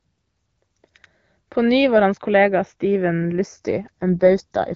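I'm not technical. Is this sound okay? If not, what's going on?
No. From 3.31 s to the end, the speech turns rougher and more artificial, a bit buzzy and robotic. This is an AMR rate drop. On a phone call using HD Voice, the network told the speech codec to squeeze the voice into fewer bits, likely because the radio signal weakened. Unlike a dropout, there's no silence or gap, and unlike a narrowed band, the voice doesn't turn muffled or tinny. The same range of sound is still there, only coarser.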